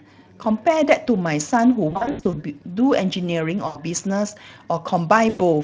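At 1.89 to 2.34 s there's VoIP packet loss concealed by the speech codec: about 260 ms drops out in bursts up to 80 ms, and the light Speex decoding extrapolates from the last pitch and filter, fading the sound out. Shorter hits follow at 3.67–3.80 s and 5.29–5.42 s.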